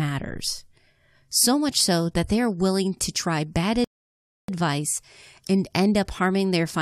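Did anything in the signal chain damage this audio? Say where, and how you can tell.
Yes. At playback, a rebuffering stall: after "willing to try bad" the speech drops to silence from 3.84 to 4.48 s, then resumes exactly where it stopped. About 0.64 s is added and nothing is lost, unlike a network dropout, which skips audio rather than pausing it.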